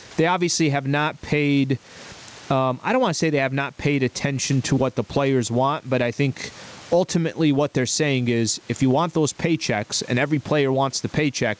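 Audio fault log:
Throughout: gain pumping. The room background sits about 38 dB below speech, and the gain swings around 20 dB, likely from input gain set far too high with a fast limiter pulling it down.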